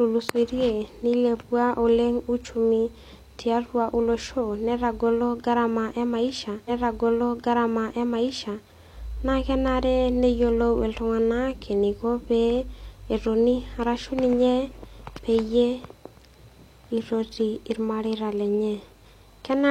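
A speech clip where, from 6.64 to 8.64 s, about 2.0 s of the programme plays again after a small blip at the jump back: a stream segment repeated, fetched or queued twice by the player.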